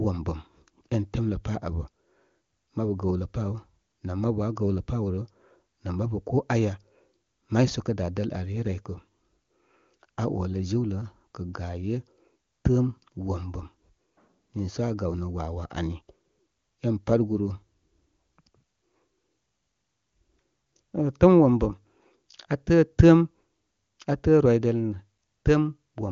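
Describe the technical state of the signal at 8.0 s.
At 8.0 s the signal is intact, with the speech carried cleanly through the AMR wideband (HD Voice) codec path at 23.85 kbit/s, whose audio band stops at about 7.3 kHz.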